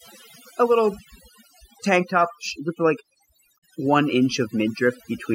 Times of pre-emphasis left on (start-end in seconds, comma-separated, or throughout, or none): none